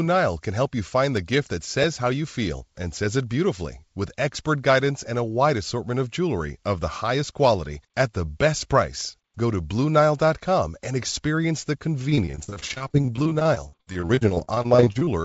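At 1.84 s, between "gift that" and "how you feel and", a jump in the sound marks a dropped buffer (overrun). A few milliseconds of audio are missing, with no silence, and the two sides butt together. The likely cause is the capture buffer being overwritten before it was read.

From 12.10 s to 15.09 s, after "and experience the", repeated packet loss makes the speech choppy and robotic. Dozens of short holes, the longest 56 ms, are patched by stretching the preceding sound, so about a third of the stretch is synthetic fill. That fill sits in a band-limited signal with nothing above 8 kHz, consistent with a wideband call codec such as G.722.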